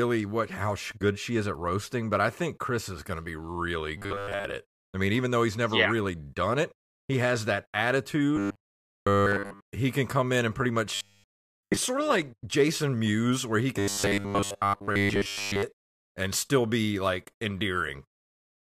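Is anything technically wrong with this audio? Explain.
Yes. The speech has robotic sound from repeated short buffers in four places. They occur from 3.98 to 4.45 s, between "going to be really" and "it I mean even". Then from 8.37 to 9.61 s, just before "he can come in". Then from 10.95 to 11.77 s, between "come in and pretty" and "sort of like". Last, from 13.79 to 15.63 s. Each has a rigid metallic buzz at 100 Hz, which fits a 10 ms chunk looping. Most of the sound is replaced in the first, second and fourth; all of it in the third. The likely cause is late audio, filled in by replaying the last short buffer.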